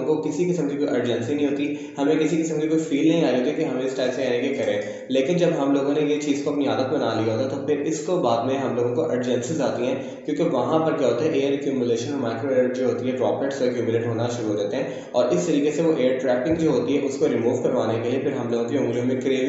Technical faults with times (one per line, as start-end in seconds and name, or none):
none